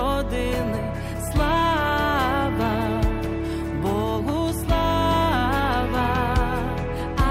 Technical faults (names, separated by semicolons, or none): none